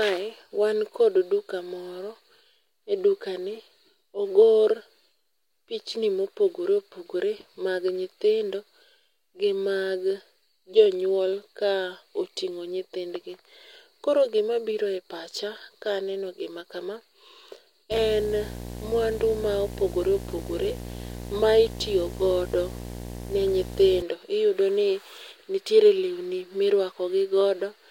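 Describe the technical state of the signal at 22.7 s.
At 22.7 s the speech carries video or display buzz. It runs from about 17.91 s to 24.02 s. A screen or video cable is coupling its signal into the audio path. The picture refreshes 60 times a second, so the interference arrives as a 60 Hz buzz. A harsh hash of upper harmonics rides on top of it. The buzz sits fairly high, not far below the speech itself.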